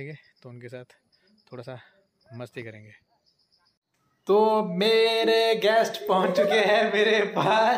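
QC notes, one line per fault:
No faults found in this clip. Nothing here needs flagging.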